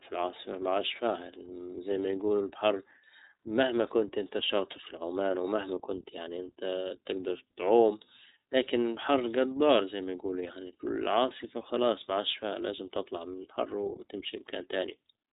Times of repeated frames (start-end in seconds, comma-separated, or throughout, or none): none